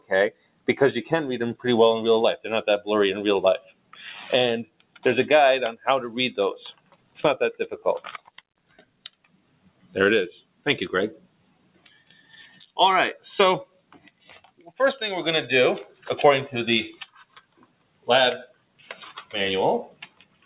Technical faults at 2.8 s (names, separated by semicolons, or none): noise suppressor applied to music or sounds